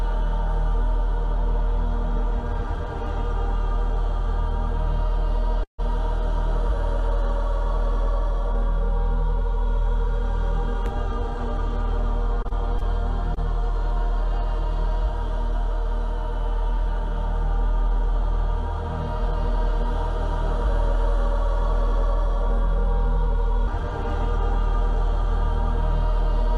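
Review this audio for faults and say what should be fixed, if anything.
Call audio freeze at 5.63 to 5.80 s: the sound stretches into a brief fading tail, then about 120 ms of silence, likely from delayed packets draining the jitter buffer; nothing is lost.

Short concealed packet loss at 12.42, 12.48, 12.78 and 13.34 s: each roughly 20 ms hole is filled by extrapolating the preceding sound, heard as quick smears or wobbles.

To prevent both, stabilise the network path and give the jitter buffer more headroom, adding forward error correction or redundancy to recover lost packets.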